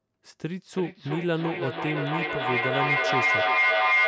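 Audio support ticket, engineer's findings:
Feedback howl, 0.71 s to end of clip. Two call devices share a room, and the mic-to-speaker loop gains level each pass. The tone narrows to around 2 kHz, repeats roughly every 300 ms, and peaks about 6 dB over speech.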